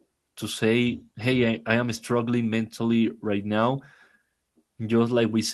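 No technical faults can be heard in this speech.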